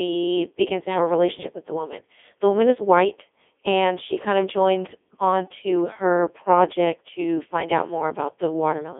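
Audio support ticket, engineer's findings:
Codec 2 vocoder throughout, fits its 3.2 kbit/s mode; waveform discarded, speech resynthesised from sine waves. Heavily robotic, buzzy speech, 300 Hz–3.5 kHz band, nothing above 3.7 kHz.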